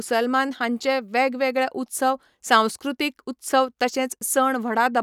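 No technical faults can be heard anywhere in the recording; the speech signal stays continuous and intact throughout.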